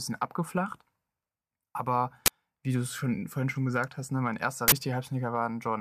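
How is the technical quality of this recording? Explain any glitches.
Two glitches mar the speech, both from an uninitialised buffer, at 2.26–2.28 s and 4.68–4.72 s. A block was played before audio filled it, so leftover memory became samples: a loud 20 ms then 40 ms burst of digital noise, showing as tall spikes and bright broadband columns on a spectrogram.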